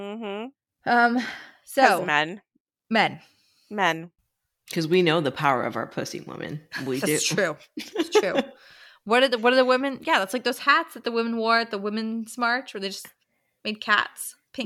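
No technical faults are audible.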